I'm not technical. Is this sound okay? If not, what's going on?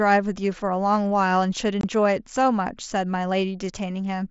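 No. At 1.81 to 1.84 s the speech briefly cuts out, a tiny gap of silence with sharp edges that can click. This is unconcealed Bluetooth headset packet loss: a few small chunks of audio travelling between the headset and the phone never arrived, and nothing filled the hole.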